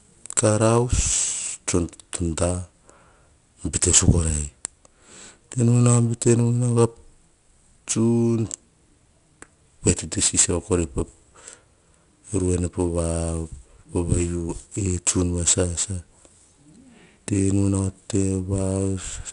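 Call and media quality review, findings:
4-bit ADPCM compression, throughout the speech. Gritty hiss riding on every loud syllable, plus roughness on sharp onsets where the adaptive step lags. No content above about 10.6 kHz, which fits a sample rate near 22 kHz and roughly 89 kbps. Probable component: legacy encoder in the media path. Unlike low-bitrate perceptual codecs, there is no swirling or warbling, and unlike plain bit-depth truncation, the noise tracks signal level.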